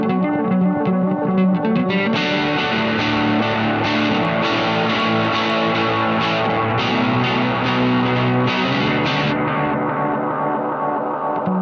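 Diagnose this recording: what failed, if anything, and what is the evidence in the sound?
Sample-rate conversion failed: the resampler restarted on every block. From 4.0 to 6.5 s, regular ticks recur four times per second, pointing to 250 ms blocks, likely on a 44.1 kHz to 16 kHz path. Each block was converted separately, leaving a small error at every edge.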